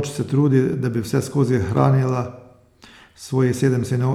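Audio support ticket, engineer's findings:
Clock drift buffer slips: clicks every 1.04 s, 0.73–3.85 s, about four. Likely unsynced device clocks. Waveform step discontinuities; thin vertical spectrogram lines.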